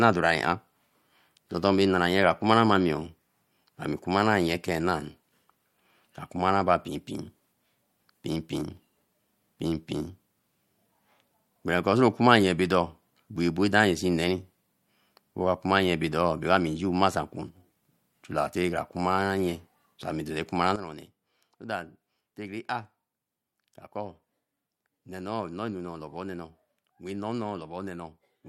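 At 20.76 s the speech and the background noise drop together, all at once, by about 12 dB, and stay at that lower level through to the end of the clip at 28.49 s. There is no fade into the quieter section; the level steps down between one sample and the next. This is a sudden gain jump, likely caused by a digital gain setting or bit shift applied without any ramp to smooth the change.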